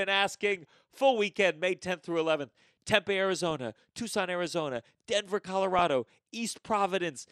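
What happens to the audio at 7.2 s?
At 7.2 s the speech is dull and gurgling, with upper frequencies flickering in and out, as it is for the whole clip. This is likely MP2 compression at a low bitrate: fixed sub-bands starved of bits switch off and turn grainy, unlike the swirling, watery artefacts of MP3.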